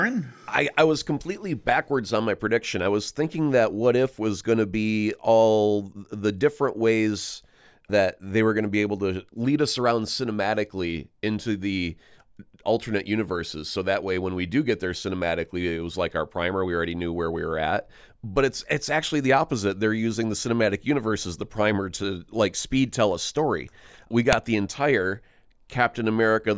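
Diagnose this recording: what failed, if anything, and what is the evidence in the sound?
A sharp, loud click at 24.33 s is a file header played as audio: a joined WAV piece kept its header, and those bytes sounded as samples.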